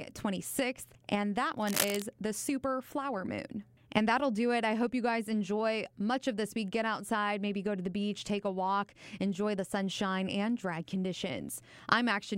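A worn cable, connector or control being moved is the likely cause of the cable scratch noise from 1.57 to 2.02 s, right after "and that" and just before "the super flower moon". The contact resistance fluctuates rapidly as the part shifts, which injects dense, irregular bursts of noise into the signal. For just under half a second, a rough scratching and rustling sits over the speech at a level only a little below it, so it is clearly noticeable.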